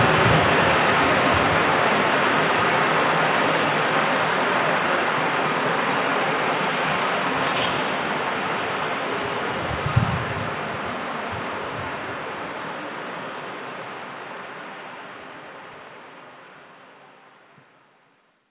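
No technical faults occur anywhere in the sound, which comes through a call path whose G.711 mu-law coding keeps everything below 4 kHz as that path is designed to.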